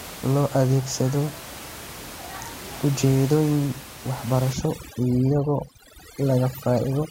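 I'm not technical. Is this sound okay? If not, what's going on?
No. Overdone noise removal starts at about 4.53 s and runs to the end. A cleanup tool set too strong is cutting out quiet bits of the voice along with the room noise, so the background drops and breaks up into twinkling specks.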